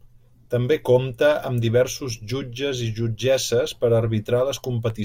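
No technical faults are audible anywhere in the recording.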